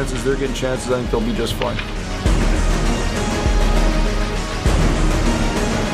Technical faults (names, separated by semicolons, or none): none